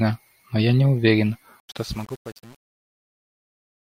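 From 1.6 s to the end of the clip, the speech shows truncation distortion on the fade. The fade-out itself, beginning around 1.6 s, passes through a gain stage that drops bits without dither. The coarse resolution fits a stage that keeps about 7 bits. As the level falls, the waveform collapses into a few square steps, so the tail turns gritty.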